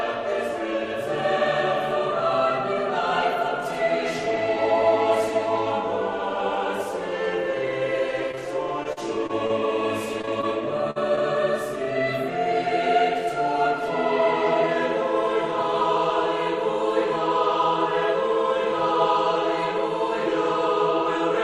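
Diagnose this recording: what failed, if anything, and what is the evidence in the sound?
Network first: short concealed packet loss at 8.31–8.39, 10.21–10.29, 10.41–10.45 and 11.16–11.19 s. Each 20 ms hole gets patched by extending the previous sound, leaving brief smears or wobbles.

Between 8.83 and 9.51 s there's repeated packet loss, the robotic kind: four gaps, longest 40 ms, about 15% of that stretch concealed, so it turns choppy.

A burst of packet loss hits at 10.91–10.98 s: about 40 ms is gone, with the last sound held and faded over it before playback jumps ahead.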